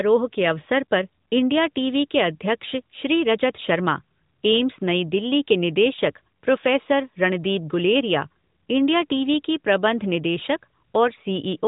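No technical faults can be heard in the speech here.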